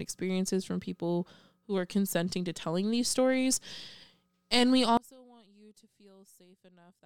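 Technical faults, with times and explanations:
4.97 to 7.05 s, one channel inverted: the speech abruptly falls by about 32 dB and nearly vanishes until the end. The likely cause is reversed polarity on one stereo channel. Summed to mono, the centred voice cancels, leaving only the small inter-channel difference.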